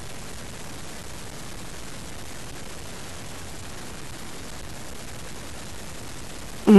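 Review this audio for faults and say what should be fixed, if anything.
Harsh, buzzy distortion runs throughout, with pauses filled by noise around -30 dBFS, likely from a stuck bit in the converter or data path. Testing the interface and its wiring with a known clean signal before recording would catch this fault.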